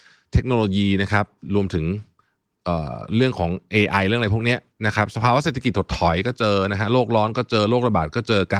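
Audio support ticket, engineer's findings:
No audible faults found in the speech recording; nothing to attribute to any component, no action required.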